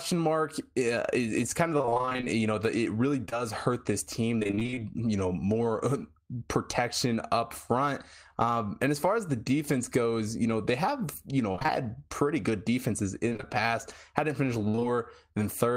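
Speech with repeated packet loss (robotic sound) at 1.77–3.33, 4.39–4.80, 11.52–11.84, 13.29–13.48 and 14.68–14.83 s. Lost packets get patched by extending prior sound, so it turns choppy.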